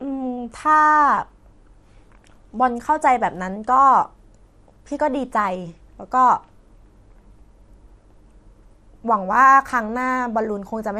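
Speech runs throughout with plainly audible MP2 compression: dull, gurgling and granular, likely from MPEG Layer II coding at a low rate, which fits about 80 kbps. A spectrogram would show upper sub-bands flickering on and off, leaving patchy, blocky high-frequency energy.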